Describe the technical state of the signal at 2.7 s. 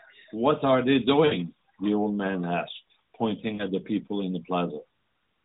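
At 2.7 s the speech is intact, with no fault present, only the normal narrowband band-limiting of an AMR-NB mobile codec running at 12.2 kbps.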